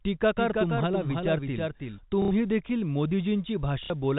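Doubled audio track from 0.37 to 1.99 s: a second full-band copy of the speech trails roughly 300 ms behind at about 5 dB lower, starting and stopping abruptly, likely from a second, slower capture path. Packet loss with last packet repeated at 2.22 to 2.31 s and again at 3.84 to 3.90 s: the receiver replayed the last audio to fill 90 ms and then 60 ms gaps, giving robotic stutters that buzz at about 33 Hz, which fits lost 30 ms packets. These stutters sit within the 4 kHz-limited band of the G.711 telephone coding.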